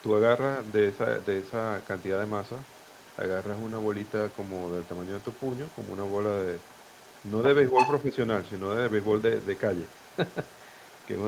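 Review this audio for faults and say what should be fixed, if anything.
A faint second voice sits well below the talker throughout the clip, from 0.0 to 11.27 s. This is the other side's voice leaking through, likely residual loudspeaker echo the canceller left in the microphone signal. Improving the echo canceller's adaptation, or lowering loudspeaker volume near the microphone, would prevent it.

The talker briefly dips by a small amount at 7.71 to 7.80 s and 8.03 to 8.12 s, which is likely speech suppressed in double talk, where the canceller ducked everything while both sides spoke. Tuning double-talk detection so near-end speech is preserved would prevent it.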